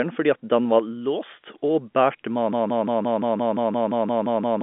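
At 2.53 s the speech turns into a broken-record loop: a 0.17 s fragment repeats exactly, back to back, about a dozen times until the clip ends. The likely cause is a player or stream that stalled and kept resending its last buffered piece, so the speech that should follow is lost. Unlike an echo, the copies don't decay or overlap, and unlike packet-loss stutter the repeats are identical and perfectly regular, all within the narrow telephone band topping out near 3.7 kHz.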